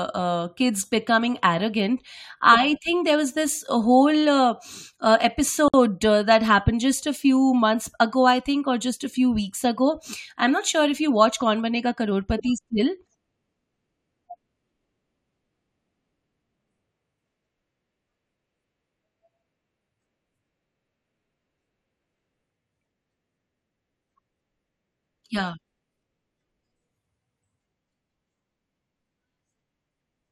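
At 5.68 to 5.74 s, right after "this whole uh uh" and before "uh that happened just", the speech drops into a gap of about 56 ms. That's a gap at a join of encoded pieces: two separately encoded chunks were butted together, and the encoder's start-up delay and last-frame padding were left in. The edges are smeared by the codec, so the truly silent part is shorter, and the talk resumes exactly where it stopped.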